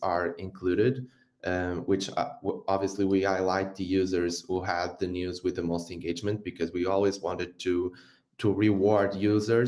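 No technical faults can be heard anywhere in the clip. The sound holds steady throughout, with nothing interrupting or disturbing it.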